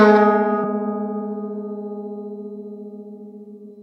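Brief blips cut into the music at 0.63 s and 3.69 s: damaged data in a compressed stream, where corrupted bytes make the decoder misread frames and lose sync.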